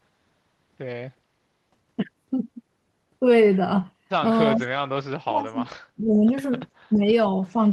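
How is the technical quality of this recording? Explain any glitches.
The speech drops out in patches near the end, a case of speech suppressed in double talk. It dips at 4.56–4.63, 5.2–5.6, 5.96–6.36, 6.89–7.08 and 7.53–7.57 s, mostly by around 10 dB, but nearly gone around 5.2–5.6 s. Likely an echo canceller ducking the talker while the far end spoke.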